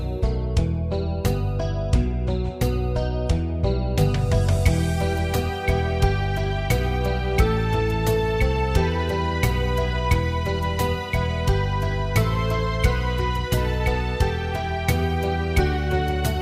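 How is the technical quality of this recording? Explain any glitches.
Nothing in the recording sounds like a technical glitch, so there's nothing to explain here.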